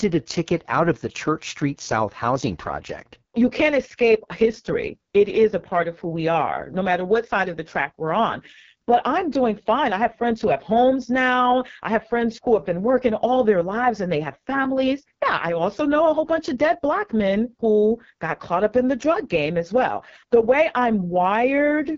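A speech clip with AMR wideband (HD Voice) codec damage throughout. Nothing is present above 7.3 kHz. The voice sounds rough and raspy, with heavy coding damage. That fits the lowest AMR-WB mode, around 6.6 kbit/s, where the vocal tract model has too few bits.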